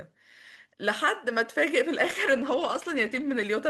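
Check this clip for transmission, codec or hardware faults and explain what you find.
There is one transmission fault, a call bitrate drop. From 2.05 s to 3.55 s the encoder was starved of bits for about 1.4 s. The speech turns coarse and watery, and the highs are cut, which fits a fall from 32 to 13 kbps.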